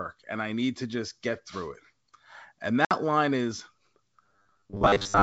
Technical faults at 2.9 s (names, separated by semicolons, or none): packet loss on an ADPCM call